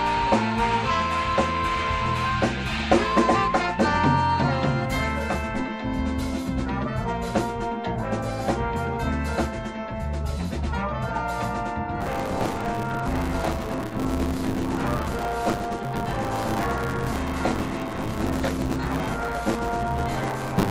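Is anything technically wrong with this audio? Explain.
Yes. From 12.0 s to the end, there is buffer tearing. The writing program and the playback hardware have drifted so their positions cross within each period, leaving roughly a third of every buffer filled with stale audio from a few tens of milliseconds earlier. Hard joins at each crossing produce a continuous robotic 100 Hz buzz, which fits a 10 ms buffer period.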